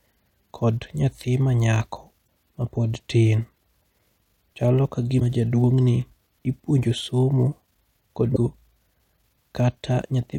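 Damaged data in the compressed stream breaks the decoder's reading of the frames twice in this speech clip. At 2.24 to 2.28 s, between "kod nyathi manyako" and "mapod tin", corrupted bytes make the decoder misread or drop frames and lose sync until it finds a valid header, producing a short glitch of about 45 ms. The same fault recurs at 8.32 to 8.37 s, again as a brief glitch.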